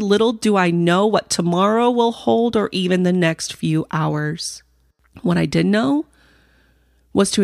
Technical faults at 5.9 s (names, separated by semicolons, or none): none